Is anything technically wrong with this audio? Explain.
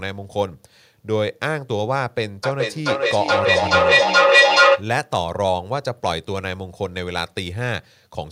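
Yes. From 2.44 to 4.89 s the speech is followed by repeats of itself arriving roughly every 0.4 s, each thinner and more ringing than the last. They build up instead of fading, peaking at about 9 dB louder than the speech itself. This is feedback echo between two devices: a second device on the same call plays this microphone's signal aloud, the microphone captures it again, and neither echo canceller removes sound from the other device's speaker, so the loop keeps feeding itself.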